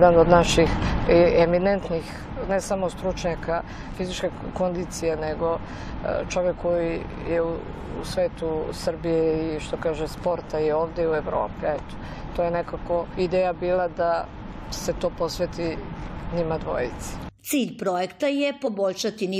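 Between 0.87 and 1.93 s, a roughly 10 dB level drop is applied in unsmoothed steps, around a hundred a second, so zipper noise ticks audibly over the sound during the fade. Damaged data in the compressed stream makes the decoder lose sync at 3.94, 13.13 and 18.66 s, each heard as a brief disruption.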